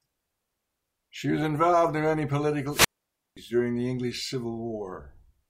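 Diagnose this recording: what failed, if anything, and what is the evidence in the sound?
The radio link of an analogue FM wireless microphone faded until the receiver's squelch muted its output: a wireless microphone squelch dropout. Just after "was involved in many", from 2.69 to 3.37 s, the speech falls into a hole of near silence lasting about 0.52 s before returning at "during the".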